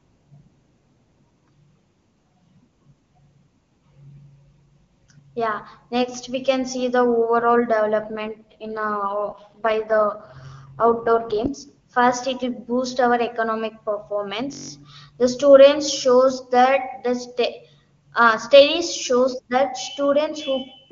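A speech clip carried over AMR wideband (HD Voice), sounding consistent with the 23.85 kbit/s mode, has two faults. From 8.01 s to 11.48 s there is an AMR rate drop. The voice turns rough and synthetic, which points to a fall to about 6.6 kbit/s. The network has likely cut the rate to spend bits on error protection over a weak radio link. The bandwidth stays the same. No gap appears. Clarity returns at 11.48 s. At 14.53 s a system hang loop begins and runs until 14.70 s. One 21.33 ms fragment repeats exactly eight times. This makes a brief steady buzz at 46.9 Hz. The computer or driver froze while the sound hardware kept replaying its ring buffer. The loop length fits a 1024-sample buffer. Almost no audio is lost.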